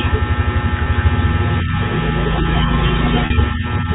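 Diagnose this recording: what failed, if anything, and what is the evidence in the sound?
Network stage, packet loss with pitch repetition: at 0.84 to 0.86 s and 3.26 to 3.30 s, the receiver bridges gaps of 20 and 40 ms by repeating the last pitch period, heard as a briefly held, buzzy sound. The gap lengths fit one and two lost packets.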